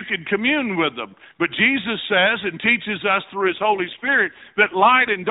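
An AMR rate drop at 3.34 s, lasting to the end of this narrowband mobile speech clip, makes the voice rougher and more synthetic with no gap or band change. This fits the link forcing the codec from 12.2 down to about 5.9 kbps.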